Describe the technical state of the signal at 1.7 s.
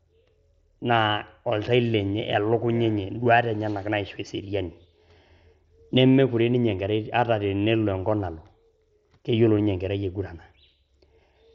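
At 1.7 s the speech is intact, with no fault, and it carries only the light graininess and slightly unsteady top band of the mSBC Bluetooth headset link, capped at 8 kHz.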